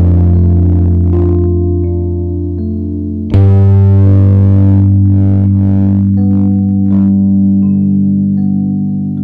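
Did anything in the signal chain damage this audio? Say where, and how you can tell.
Yes. The music is hard clipped for the whole clip, consistent with a stage overdriven by about 10 dB, most likely at the converter or a fixed-point format conversion. Roughly a tenth of the samples went over that stage's limit, so peaks are sliced flat. The flat tops add a harsh fuzz on every loud moment. That fuzz reaches well up the spectrum, not just a crackle on occasional peaks. Soft saturation would round the tops and sound warmer. This is abrupt and gritty.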